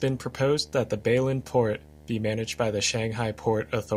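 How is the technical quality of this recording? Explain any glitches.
The quality is hurt by one steady problem under the speech. From start to finish there's video or display buzz: a monitor or video cable leaking into the audio line, giving a 75 Hz buzz at the screen's refresh rate with fizzy hash on top, sitting about 25 dB below the speech.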